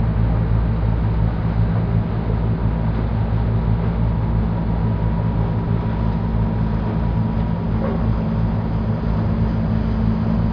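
No technical faults can be heard anywhere in this audio.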